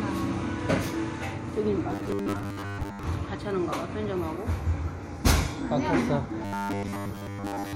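Audio likely stopped arriving in time from 1.89 to 3.03 s and again from 6.45 s to the end, so the last short stretch was repeated in place of most of the real sound. The result is robotic sound from repeated short buffers. Each repeat lasts about 10 ms, which imposes a fixed 100 Hz buzz on the sound, turning it metallic and rigid while its outline loosely persists.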